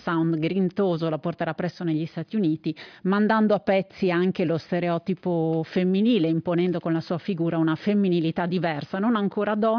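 There are no technical faults to describe at any point in the audio.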